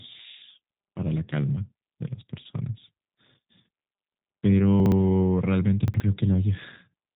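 From start to finish the speech has that G.729 codec sound: a slightly rough, synthetic edge from being rebuilt out of a vocal tract model, a pitch predictor and a few pulses per frame, and nothing above 3.8 kHz, which fits an 8 kbit/s G.729A stream.

Then at 4.80 to 4.92 s and again at 5.88 to 6.00 s there are chunks out of order. In each case a 60 ms chunk lands one slot late and swaps places with its neighbour, so you get a brief jumbled stutter.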